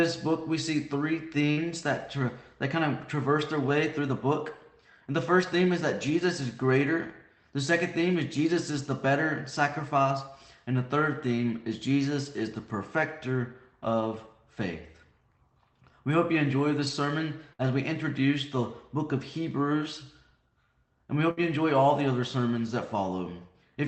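At 1.51 s, 17.53 s and 21.31 s there is a burst of packet loss. Each lasts about 90 ms. Several packets in a row never arrived in time. The receiver stretched the last sound it had for about 55 to 60 ms, fading it out. That fill is heard as a brief held tone or a dying hiss. Then the audio jumps ahead, skipping about 60 ms. All this passes through a wideband call codec, with little audible above 8 kHz.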